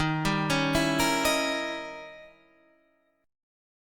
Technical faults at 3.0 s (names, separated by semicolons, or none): none